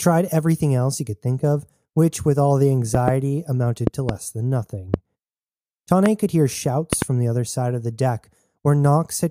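Loud pops at 2.95–3.10 s, 3.87–4.11 s, 4.94–4.96 s, 6.06–6.08 s and 6.93–7.04 s jump about 15 dB above the speech, likely from electrical pulses. The first, second and last are double thumps; speech continues underneath.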